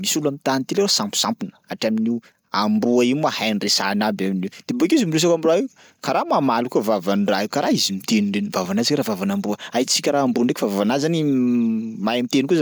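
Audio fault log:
No technical faults are present in the speech recording, and the signal is continuous throughout.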